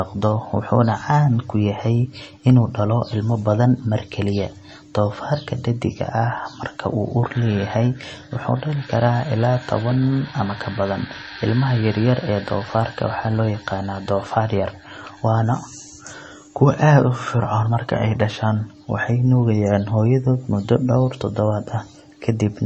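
Throughout, the speech has nothing above 8.3 kHz, a flat spectrogram ceiling with swirly, smeared detail below it: likely low-bitrate audio saved at a high bitrate, a heavily compressed MP3 re-encoded larger.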